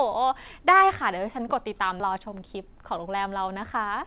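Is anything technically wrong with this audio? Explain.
Yes, there are two faults, both from about 2 s onward in the speech.

Skip ahead, at 2.00 to 2.02 s: playback jumps forward with no fill, so roughly 0.7 s of speech is missing and the two sides are spliced almost directly. This happens when a stretch of audio is discarded, either lost in transit or dropped by an overflowing jitter buffer, while later audio is already queued. It sounds like an abrupt cut in the flow of speech.

Jitter buffer speed-up, from 2.1 s to 4.06 s: the speech runs at about 106 percent of normal speed while keeping its pitch. After the jump, the receiver was still holding more audio than its target, so it repeatedly removed short pieces of one or a few pitch periods, trimming around 150 ms in total to reduce delay. The result sounds slightly hurried and rushed. Throughout, the band stops at 4 kHz, consistent with a G.711 call path.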